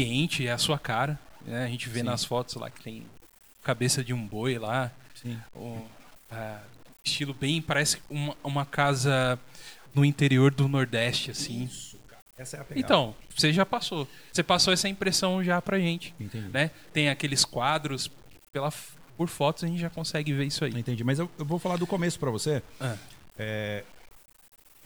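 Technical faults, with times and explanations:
Throughout, low bit depth without dither: the speech carries a grainy, rasping distortion that shifts with the sound, roughest on soft syllables and word endings, where the quietest parts break into a sputter or vanish between steps. The likely cause is 8-bit truncation with no dither, so the rounding error tracks the signal instead of becoming a steady hiss, leaving the error roughly 30 dB below the speech.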